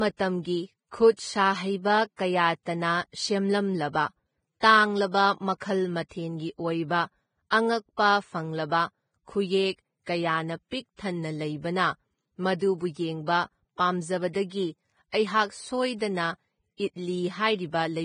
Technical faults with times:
0.00-18.04 Vorbis compression

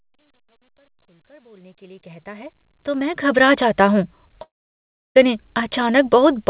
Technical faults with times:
4.42-5.17 long network dropout

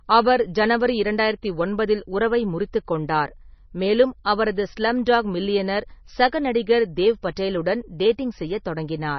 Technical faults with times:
0.00-9.18 MP3 compression
7.36 pre-echo

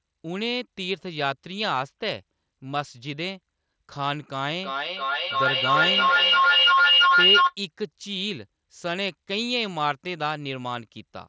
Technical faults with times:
4.62-7.56 feedback howl

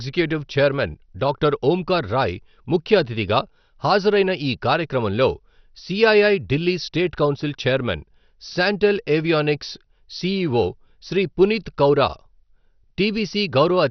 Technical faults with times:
0.00-13.90 MP2 compression

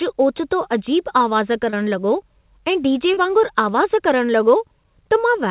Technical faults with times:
1.70-1.75 short concealed packet loss
3.13-3.20 short concealed packet loss

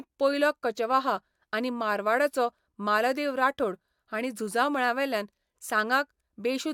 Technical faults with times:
none

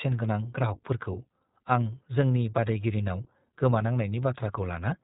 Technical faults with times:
0.00-5.03 iLBC codec

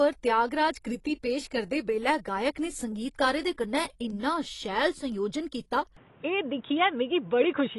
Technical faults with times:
0.00-7.79 AAC compression
5.97-7.79 input switched to a poorer device

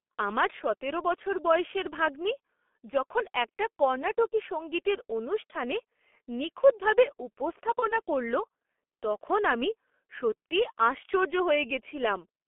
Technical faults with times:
0.00-12.48 G.723.1 codec
7.79-7.99 VoIP packet loss concealed by the speech codec

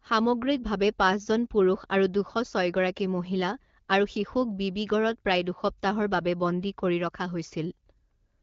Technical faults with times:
none

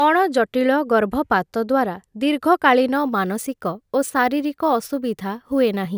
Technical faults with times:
2.95-5.98 crude rate conversion

